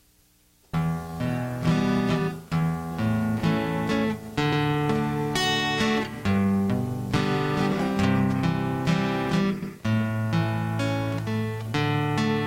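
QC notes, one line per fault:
4.52–4.63 s and 9.62–9.73 s: overlapping chunks. At each join a 100 ms stretch of sound plays twice, heard as a brief stutter. The audio was handled in 5 s blocks, and each new block began 100 ms before the previous one finished. The tail of one block is therefore replayed at the head of the next. This is why the stutters fall at a steady interval of about 5 s.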